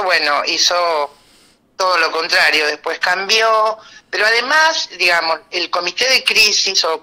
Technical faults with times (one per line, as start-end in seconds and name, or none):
0.14-0.71 hard clipping
1.81-2.59 hard clipping
3.04-3.39 hard clipping
4.21-4.67 hard clipping
5.03-5.32 hard clipping
5.74-6.81 hard clipping